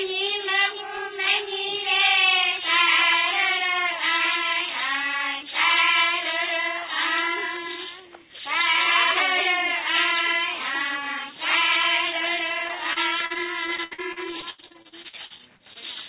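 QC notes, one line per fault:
12.68–15.77 s, repeated packet loss (robotic sound): about two dozen holes, up to 81 ms, are patched by repeating earlier audio, so the sound turns choppy, with pieces missing. A spectrogram shows stuttering, smeared blocks below the 4 kHz ceiling.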